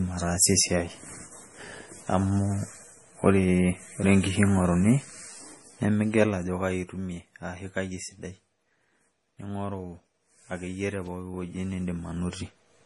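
Speech, likely run through MP3 compression at a low bitrate, around 32 kbps, throughout: nothing above 11.4 kHz remains, and heavy codec damage sounds watery or swirly.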